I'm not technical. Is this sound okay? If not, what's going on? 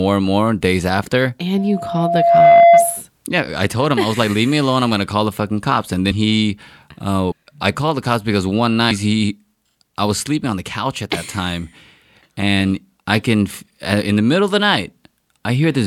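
No. Loudspeaker feedback squeal from 1.57 to 3.01 s: the microphone picks up its own loudspeaker, and one pitch near 684 Hz keeps looping and growing. It swells over about a second into a steady whistle louder than the speech.

Compressed frames skipped at 6.10 s, 7.30 to 7.32 s, and 8.90 s: chunks of the compressed file, each about 26 ms, never get played, so the speech jumps ahead by roughly a seventh to a fifth of a second.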